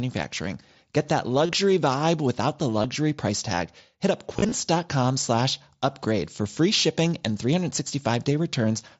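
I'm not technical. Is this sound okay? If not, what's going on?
No. There is concealed Bluetooth headset packet loss: the headset briefly lost bits of speech, and the phone filled each gap by repeating the last moment of voice. Unlike a dropout, which goes silent, this leaves a short buzzy hum. It happens at 1.46–1.49 s before "vibe without the", at 2.82 s before "price tag", scattered over 4.37–4.52 s, and at 6.36–6.39 s before "free shipping and".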